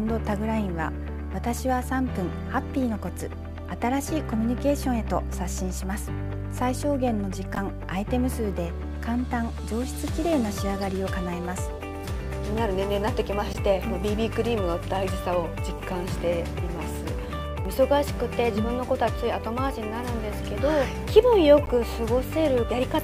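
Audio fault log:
7.55–7.58 s, 13.51–13.56 s, 21.63–21.68 s: corrupt frame decoded. Damaged compressed frames, about one at 7.55 s and two at each later spot, were played as if intact. Misread gains and codes put energy at the wrong frequencies, heard as brief chirps, squeaks, blips or noise bursts peaking around -15 dBFS, then about -20 dBFS.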